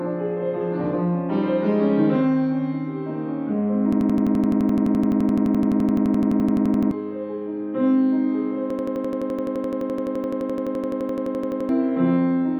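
A machine-gun stutter repeating an 85 ms fragment about 11.7 times a second runs from 3.93 to 6.91 s and again from 8.70 to 11.69 s. Each time, roughly three seconds of audio is lost. This is a system hang loop: the system froze while the hardware kept replaying one buffer, which fits a 4096-sample ring buffer.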